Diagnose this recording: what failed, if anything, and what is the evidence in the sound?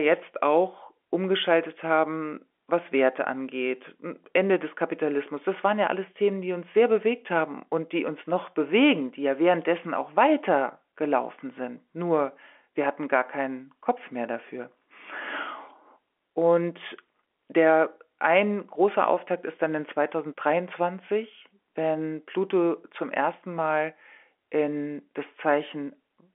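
Nothing in this speech recording has failed at any stage. It has passed through G.711 telephone coding, which holds it to the 250 Hz to 3.4 kHz line band, and that narrow telephone sound is simply what a working fixed-line path gives.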